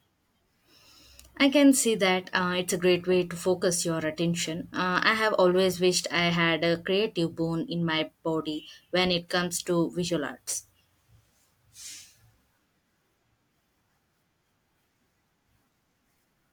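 No technical faults are audible.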